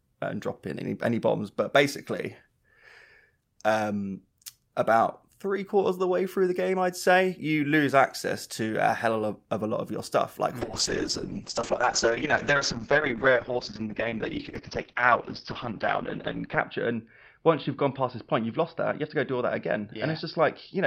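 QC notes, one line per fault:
10.62–20.86 s, call bitrate drop: right after "your stuff like mm" the sound turns muffled and rough, with a watery, smeared texture, and stays that way to the end. The encoder was starved of bits, which fits a fall from around 64 kbps to about 7 kbps, held at its lowest for about 6 s. The audio band narrows from 20 kHz to 6 kHz. Unlike a simple low-pass filter, the coarse coding graininess comes with the dullness, and unlike packet loss, there are no gaps or dropouts.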